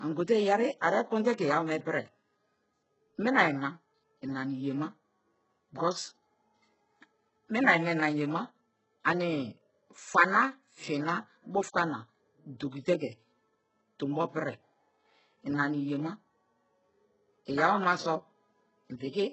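Throughout the speech, the treble sounds synthetic and rough, and nothing reaches above 8 kHz. S sounds turn gritty and lispy. This is likely HE-AAC compression at a very low bitrate, near 8 kbps. The upper band is rebuilt from copied lower bands, so harmonics misalign.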